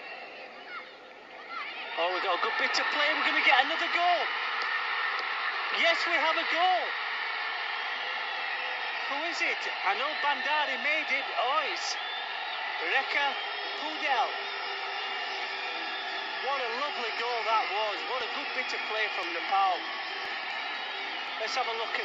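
From 17.19 to 21.28 s, periodic USB or driver dropouts skip a fraction of a millisecond of audio about every 1.02 s, around five times. Each skip is a tick, a thin vertical broadband line on the spectrogram and a small step in the waveform.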